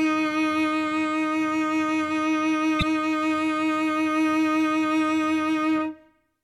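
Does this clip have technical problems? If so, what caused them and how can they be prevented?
Yes. From 2.79 to 2.83 s the music breaks up briefly, caused by damaged data in the compressed stream. Corrupted bytes made the decoder misread frames and lose sync until it found the next valid header. Preventing it means transferring and storing files with checksums or error-checked protocols, and muxing metadata so it never overwrites audio frames.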